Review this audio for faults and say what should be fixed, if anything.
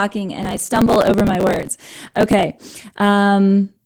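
Opus voice compression runs through the whole speech clip at about 16 kbps in hybrid mode, so the band below 8 kHz is coarsely predicted and the top is sketched thinly. The result is hoarse, slightly robotic speech rather than the swirly, watery highs of MP3. Encode at a higher bitrate.

Processor overload crackle tears through the sound from 0.43 to 2.43 s. Well over a hundred tiny buffers, each around a millisecond or two, were simply skipped, leaving hard-edged gaps. Unlike clipping, the crackle ignores loudness and stops once the load passes. Use larger buffers or reduce processing load.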